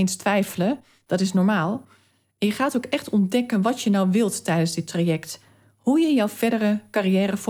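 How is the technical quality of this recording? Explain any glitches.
There is one glitch in this speech recording. From 5.30 to 6.35 s, after "nou wilt tijdens dit", a drift correction step shifts speed 5.3% and pitch nearly a semitone, then snaps back. Clock-matching software likely changed its playback rate to rebalance its buffer.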